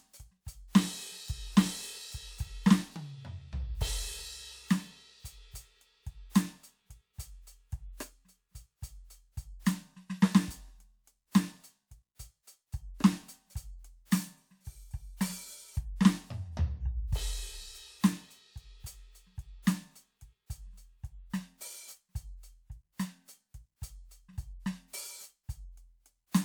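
No technical faults can be heard anywhere in this music recording. The sound runs continuously without any dropout, glitch or interruption.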